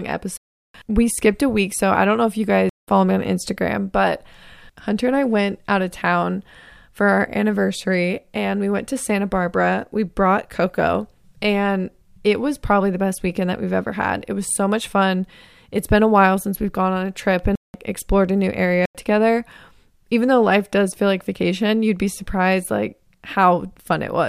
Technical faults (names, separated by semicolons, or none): block of digital silence